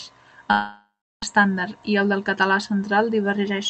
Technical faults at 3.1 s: none

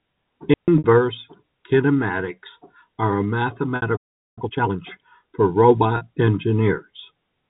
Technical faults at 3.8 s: packet loss with pitch repetition

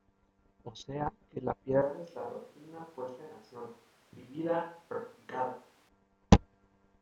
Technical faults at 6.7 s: none

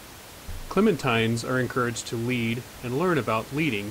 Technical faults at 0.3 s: none

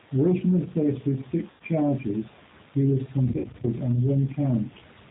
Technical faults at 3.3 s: G.729 codec; VoIP packet loss concealed by the speech codec

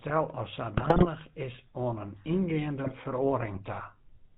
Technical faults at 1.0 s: GSM full-rate codec; GSM bit errors

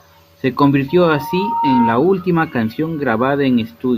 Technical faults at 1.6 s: loudspeaker feedback squeal

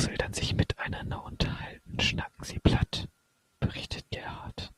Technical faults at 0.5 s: none

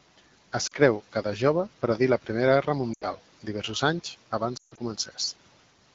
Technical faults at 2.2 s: none

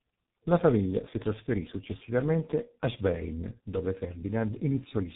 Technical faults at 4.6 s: tandem speech coding

